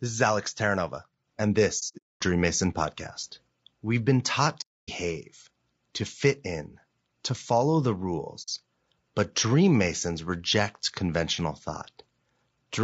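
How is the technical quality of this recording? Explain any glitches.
The quality is compromised throughout, with three dropouts. The whole clip has plainly audible low-delay AAC compression damage. The speech sounds rough and grainy. Noise fills the gaps between harmonics, and the top band sounds thin and synthetic. The likely cause is AAC-ELD at about 32 kbps. Its short frames resolve pitch poorly and starve the bit budget.

AAC frame loss with muting occurs at 1.79 to 2.21 s, 4.61 to 4.89 s, and 8.42 to 8.49 s. The decoder zeroed the missing frames, so the sound fades into soft-edged silences. The first loss is scattered, with its longest hole about 200 ms. The second lasts about 270 ms, and the last about 60 ms.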